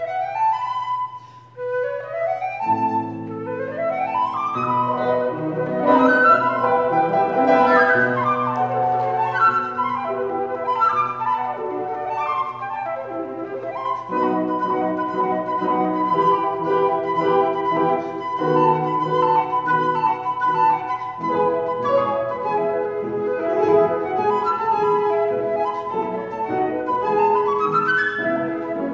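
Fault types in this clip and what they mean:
No technical faults can be heard in the audio.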